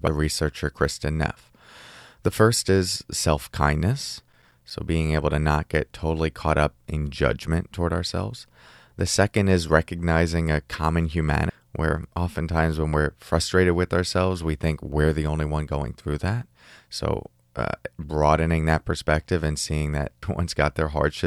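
A brief glitch cuts through the speech at 0.07 s, 11.50 s and 20.23 s. Each is damaged data in a compressed stream: corrupted bytes make the decoder misread the frames there and lose sync until it locks onto the next frame header.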